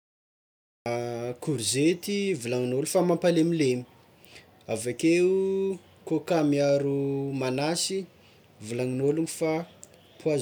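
For the first 0.86 s there is digital silence, and at 0.86 s the speech enters already in progress, with no natural attack or rise in level. This is a cut-off start: capture or streaming began late, so the opening of the sound was never recorded and the signal jumps from silence to mid-utterance. A quiet lead-in or a slow fade-in would build gradually. A dropout would interrupt sound that was already playing.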